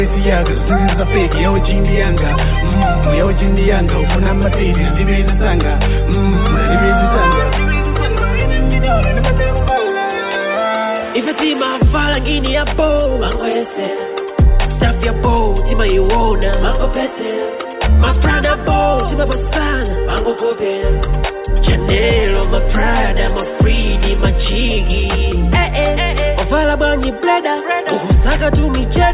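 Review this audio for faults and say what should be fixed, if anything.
No faults turned up in this audio, so nothing needs to be fixed.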